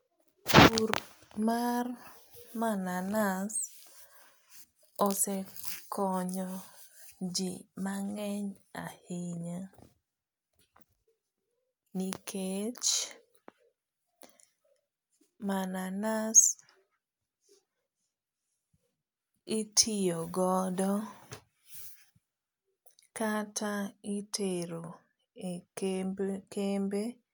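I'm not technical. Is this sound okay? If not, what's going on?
Yes, nothing in this recording calls for attention, and there's nothing to fix.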